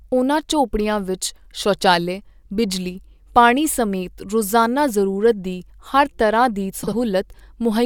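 At 6.83 s, a brief stretch of the speech scrambles until 6.93 s. This is frames out of order. Two adjacent blocks of audio were swapped before decoding, each about 43 ms long and holding two frames apiece. The later block plays first, then the earlier one. The result is a quick garbled flutter. Nothing is missing, and the timing after the swap stays intact.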